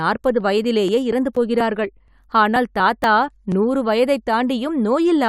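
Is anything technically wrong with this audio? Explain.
Yes. From 0.16 to 3.52 s there are periodic USB or driver dropouts: every 0.24 s something stalls the audio path, roughly 10 ms of speech is skipped, and about fifteen evenly spaced ticks result.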